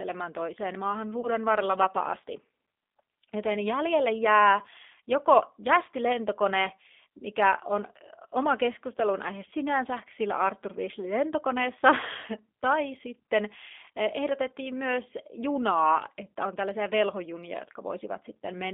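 Throughout, the speech sounds slightly rough and synthetic, with a narrow telephone band running from about 250 Hz to 3.6 kHz and nothing above it. This is the G.729 codec, and the codec damage is plainly audible. The character fits an 8 kbit/s G.729A stream, which rebuilds each 10 ms frame from a vocal tract filter, a pitch predictor and a handful of pulses instead of carrying the waveform itself.

At 1.21 s, right after "toiseen maahan", the sound smears into a buzzy tone or coloured noise that fades until 1.29 s. Shorter versions of the same glitch follow "jäljelle jää" at 4.60 to 4.64 s, and at 8.15 to 8.20 s between "lentokone mikä on" and "oma keskustelun aihe sinänsä". This is VoIP packet loss concealed by the speech codec. The first gap fits about 20 ms of missing audio and the later two about 10 ms each. The decoder filled each gap by extending its last pitch and filter with falling gain, and the distortion carries on briefly after packets resume.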